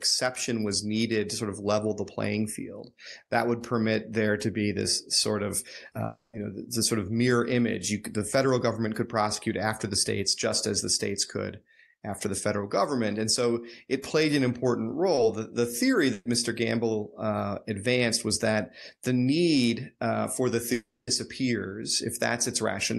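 Just after "be this sort of", from 6.05 to 6.35 s, the speech dissolves into a fading continuation of the last sound and then about 130 ms of near-silence before it resumes further along. About 280 ms of audio never plays. This is a long network dropout, likely a stretch where no packets reached the receiver. Its concealment extended the final sound, let it decay, then gave up and left a gap.

At 15.15 to 15.19 s there is a brief smear in the flow of sound, a short wobble rather than a gap. This is short concealed packet loss. About 20 ms of audio failed to reach the decoder in time, so the receiver stretched the preceding sound over the hole and blended back into the real signal.

Right after "the theory", from 16.13 to 16.27 s, the sound turns into a dimming continuation of the last sound that ends in about 30 ms of quiet before the speech jumps ahead. This is a burst of packet loss. 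Roughly 120 ms of consecutive audio was lost or arrived too late, and the receiver repeated the last sound while turning it down across the gap.

After "need uh for the", from 20.73 to 21.09 s, the same pattern returns more severely. A short fading continuation gives way to about 240 ms of silence, and around 340 ms of audio is missing when the speech picks up again. This is another long network dropout, likely an interruption in packet delivery. Throughout, the speech carries the coding character of a call codec whose top end stops near 12 kHz, which fits Opus.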